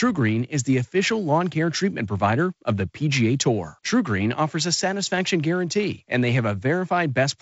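No technical faults are audible in this speech.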